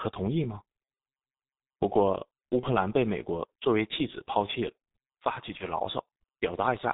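From the start, the whole speech clip carries the sound of the G.723.1 codec. It sounds like the 6.3 kbit/s mode, and the damage is heavy. Nothing comes through above 4 kHz, and the voice model updates only every 30 ms, so the voice sounds muffled and hoarse and consonants smear together. A plain low-pass filter would dull the top end but leave the voice clean. The hoarse, rough texture here comes from the codec itself.

At 2.60 to 2.67 s and again at 5.57 to 5.68 s there is VoIP packet loss concealed by the speech codec. Each gap sounds like one missing 30 ms frame. The decoder stretches the last pitch and filter into a brief buzzy tone or coloured noise that fades. The voice stays weak for a moment after the gap. Packet loss without concealment would cut to silence or click instead of smearing into a fading tone.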